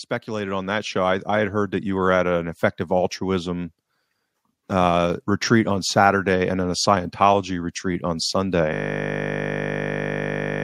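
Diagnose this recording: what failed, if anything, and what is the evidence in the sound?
Call processing stage: the automatic gain control judged the input too quiet and wound its gain up. From 0.25 s to 2.67 s the speech and the background noise floor swell together by about 7 dB. The rise is gradual over more than two seconds rather than a step, which points to a slow AGC release. Because the noise rises in lockstep with the speech, this is automatic gain rising and not a change in how loudly the talker spoke.

Driver or buffer stage: a system hang loop. Right after "retreat on", at 8.73 s, the host or audio driver stopped supplying new samples, but the hardware kept replaying the same ring buffer. A single 20 ms slice repeats exactly, nearly a hundred times, until the recording ends. At a 50 Hz repeat rate the loop is too fast to hear as a stutter and fuses into a steady buzz, which fits a 20 ms buffer.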